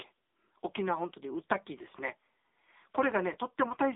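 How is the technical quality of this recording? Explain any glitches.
The quality is poor throughout, because the speech went through an AMR narrowband mobile codec. It is squeezed into a telephone band of roughly 300 Hz to 3.7 kHz, with nothing above 3.8 kHz. Heavy codec damage leaves the voice buzzy and synthetic, which fits a low AMR-NB mode around 6.7 kbps, where the coder rebuilds speech from a simple vocal-tract model driven by a few pulses per 5 ms slice.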